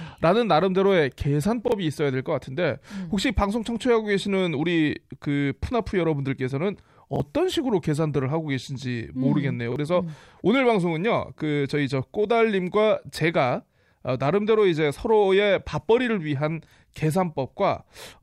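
At 1.68–1.72 s, 7.16–7.20 s and 9.72–9.76 s the speech stutters briefly, each time from a repeated buffer. Fresh audio did not reach the output in time, so the device replayed the slice it had just played once more. Each repeat is 40 ms long, which fits a 40 ms buffer, and is joined hard to the audio on either side. It sounds like a quick doubled fragment. Around 40 ms of the speech is lost each time.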